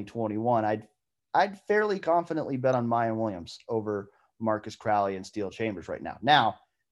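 Speech clip with a corrupt frame decoded at 2.73 s, just after "I'd fairly confidently bet": a chirp, squeak or burst of noise, around -35 dBFS, spanning a few damaged frames. Misplaced spectral energy distinguishes it from a plain click or dropout gap.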